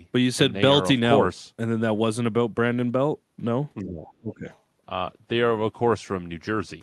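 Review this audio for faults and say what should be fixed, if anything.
Speech suppressed in double talk, 3.81 to 4.45 s: the speech dips sharply, at its deepest around 20 dB, and thins or breaks up for roughly half a second in total. This is likely because both ends were talking at once and the echo canceller, unable to tell the local talker apart from the loudspeaker echo, attenuated everything it heard. To prevent it, use a canceller with stronger double-talk detection, or headsets that keep the loudspeaker signal out of the microphone.

Other side's voice leaking through, 4.07 to 4.12 s and 4.54 to 4.59 s: two brief, faint scraps of a second voice surface, roughly 30 dB and 35 dB below the main speech. These are likely loudspeaker echo the canceller failed to remove, slipping past during and just after the suppression episode. The audio shows the band limit near 12 kHz typical of an Opus call path. 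To prevent the leakage, lower playback volume, improve the canceller's residual echo suppression, or use headphones.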